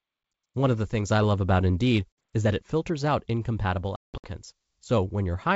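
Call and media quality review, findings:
Packet loss on ADPCM call, 3.96–4.27 s after "it filters out incompatible": about 240 ms of hard silent gaps, longest 180 ms; decoder predictor and step size desync, speech resumes slightly distorted.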